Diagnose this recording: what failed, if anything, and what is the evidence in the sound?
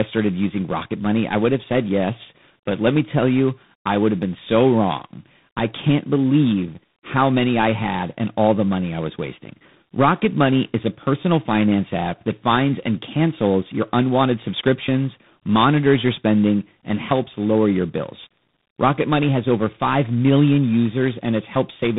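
Tandem speech coding affects the whole recording, at the codec stage. The speech sounds rough and noisy from start to finish, with nothing above 3.8 kHz. The call appears to have been decoded and re-encoded at each link boundary, probably by about three speech coders in series, with a low-rate ADPCM coder among them. Each coder added its own quantisation error to the previous coder's output, so the damage compounded into a harsher, noisier sound than any single coder would produce.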